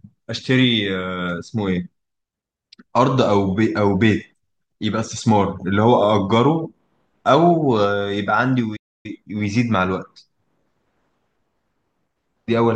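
At 8.76 s a playback stall, likely the player running out of data, silences the speech for 0.28 s until it resumes at 9.06 s.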